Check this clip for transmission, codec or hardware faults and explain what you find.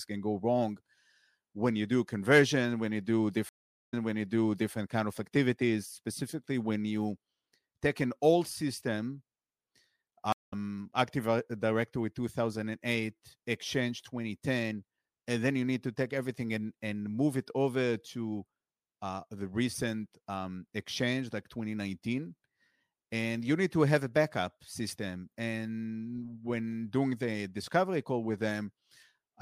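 Two stream reconnects break this speech clip, at 3.49 to 4.73 s and 10.32 to 10.53 s. Each time the connection dropped, the player fell silent, reconnected and started a fresh decoder mid-stream. At 3.49 s the gap lasts 0.43 s, then the server's resent burst puts playback 0.81 s earlier, so a stretch repeats. At 10.32 s a 0.19 s silence is followed by a resume roughly a fifth of a second later, skipping that audio.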